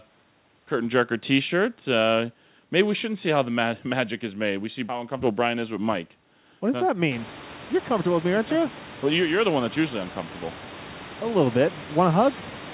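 Nothing stood out as a fault on listening to this speech; the room noise that rises by about 24 dB around 7 s belongs to the recording itself, and the absence of anything above 4 kHz fits the G.711 mu-law call path.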